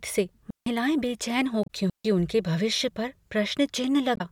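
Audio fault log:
0.50–0.66 s and 1.90–2.05 s: digital wireless dropout. The speech cuts to near silence for about 160 ms and then about 150 ms. Each gap has a very short fade at its edges and no noise burst before or after. The sound fits a digital radio link losing too much data to recover. Rather than passing corrupted audio, the receiver mutes its output until the link is good again, which leaves clean holes in the signal.
1.63–1.70 s and 4.14–4.21 s: damaged data in a compressed stream. Each event is a brief glitch lasting about 70 ms, breaking into the speech. Part of the encoded stream at these points was corrupted. The decoder misinterprets or rejects the affected frames, loses frame sync and scans ahead for the next valid header. That produces a short artificial glitch in place of the intended audio.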